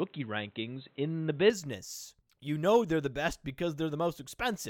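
Speech that sounds dull and boxy from 0.0 to 1.5 s, with nothing above 4 kHz, a level difference of around 5 dB and a different faint background hiss, then opens up with no gap. That combination likely points to an input switched to a poorer device, unlike a plain low-pass or codec bandwidth drop, which would leave level and noise unchanged.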